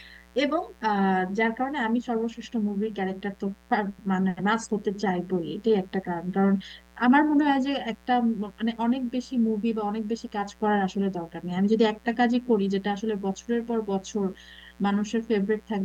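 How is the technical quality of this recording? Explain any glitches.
A steady, raspy buzz runs under the speech for the whole recording, sitting roughly 30 dB below the voice: quiet, but constant. This is mains buzz from a 60 Hz supply. Sharp switching spikes from a dimmer, a rectifier or an unshielded cable get into the signal twice every mains cycle. That spreads the hum into a dense row of 60 Hz harmonics reaching up into the kilohertz range, which gives it that edgy, rasping character rather than a smooth low hum.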